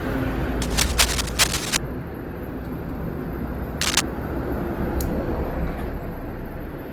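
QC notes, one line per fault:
Throughout: generation loss. The sound is swirly, smeared and hollow, with blurred attacks, more than one Opus encode at around 48 kbit/s would explain. This likely comes from roughly seven re-encodes, each requantising on a shifted frame grid. The accumulation is what separates it from a single low-bitrate pass.
0.61–1.78 s and 3.81–4.01 s: cable scratch noise. Dense, uneven rustling bursts sit about 5 dB above the sound, the first lasting over a second and the second brief. They likely come from a worn cable or connector being moved and changing contact resistance. Unlike isolated clicks or dropouts, the noise is dense and scratchy while it lasts.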